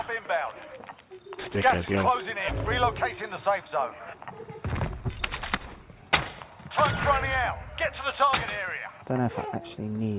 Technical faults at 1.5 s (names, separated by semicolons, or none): none